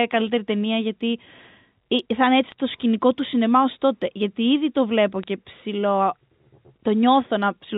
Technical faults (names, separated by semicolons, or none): bit errors on a digital phone line